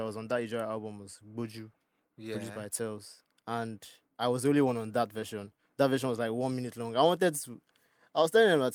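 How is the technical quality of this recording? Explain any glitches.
The speech signal shows no technical glitches at any point.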